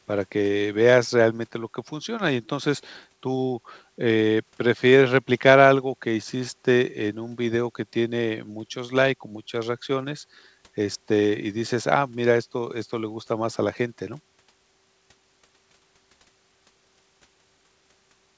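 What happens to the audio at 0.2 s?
Nothing goes wrong at 0.2 s: the speech passes through the call path intact, with no dropout, glitch or distortion at that point.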